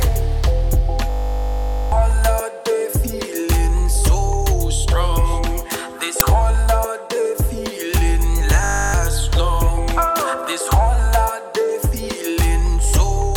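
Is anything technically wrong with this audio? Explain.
Yes. There are two kinds of fault. A system hang loop occurs from 1.1 to 1.92 s and from 8.64 to 8.94 s. A frozen system let the hardware replay one 20 ms buffer, heard as a steady 50 Hz buzz, with roughly 0.7 s and 0.3 s of sound lost. At 6.2 s, an uninitialised buffer plays 10 ms of leftover memory. It sounds like a loud crack.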